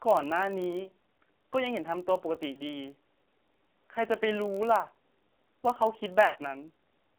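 Across the whole clip, the speech has passed through the AMR narrowband mobile codec at a low rate of about 5.9 kbps, and the damage is heavy. With so few bits to model the vocal tract and its pulse excitation, the voice comes out buzzy and synthetic. The line band confines everything to roughly 250 Hz to 3.4 kHz, so the sound is thin, with no low body and no air above the telephone band.

Also running throughout is a block size mismatch (padded). One stage hands over blocks slightly shorter than the 1024-sample blocks the next stage reads, and the shortfall in each block is filled with zeros. Those tiny regular gaps produce a steady buzz at 46.9 Hz, which fits a 1024-sample read at 48 kHz. Because the padding stretches the timeline, the audio runs marginally slow, at 0.999 times normal speed, without any audible pitch change.

From 2.52 to 2.61 s come lost AMR speech frames. About 40 ms of data failed, which fits two 20 ms frames. 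The decoder filled the hole by repeating its last good pitch and vocal-tract settings at falling gain, so the sound briefly smears and dips before normal decoding resumes.

From 6.26 to 6.36 s a longer run of about 80 ms is lost, consistent with four frames. Here the concealment holds the last sound longer, drawing it out as it fades toward silence. The voice then returns weak and rough for a moment.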